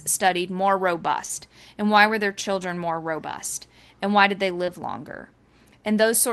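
Short concealed packet loss in this speech recording occurs at 1.25–1.31 s, just after "studied more", and at 4.65–4.69 s, after "why did they". Roughly 40 ms and 20 ms of audio arrived too late, and the receiver papered over each gap by extending the preceding sound, leaving brief smears.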